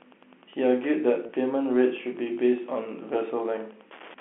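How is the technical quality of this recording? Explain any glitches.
The recording has two faults, one running throughout and one brief glitch, heard over a telephone-band line carried in G.711 coding.

Wi-Fi interference runs for the whole clip. A nearby Wi-Fi radio's beacon, sent every 102.4 ms, is picked up and rectified by the audio circuit. The result is a steady tick about ten times a second, roughly 30 dB below the speech. That regular, pulsed rhythm separates it from mains hum, which is a continuous tone rather than a series of ticks.

Packet loss with pitch repetition occurs from 1.26 to 1.29 s. About 30 ms of audio went missing, which fits a single lost packet. The receiver filled the gap by repeating the last pitch period. Because the gap is short, it sounds like a briefly held, buzzy note rather than a silent dropout or a sharp click.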